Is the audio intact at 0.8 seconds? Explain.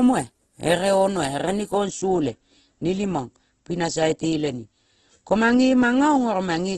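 No. At 0.8 seconds, as throughout the clip, the speech sounds rough and grainy, with a noisy texture where clean tone should be, and nothing is heard above about 12.2 kHz. This is likely heavy Opus compression in its music (CELT) mode, at a rate that fits roughly 12 kbps. With too few bits, the encoder keeps each band's energy but fills the detail with folded or noise content, and it trims the top of the spectrum.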